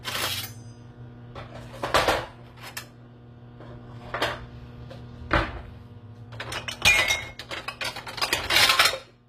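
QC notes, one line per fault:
Throughout, HE-AAC compression: plainly gritty, metallic treble, likely from spectral band replication copying lower bands upward, which fits a low bitrate around 24 kbps.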